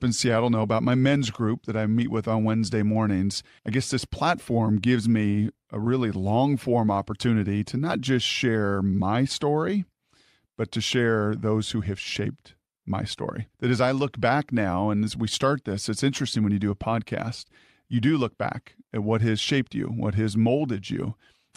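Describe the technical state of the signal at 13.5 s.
At 13.5 s the speech signal is intact, with no technical fault to be heard at that moment.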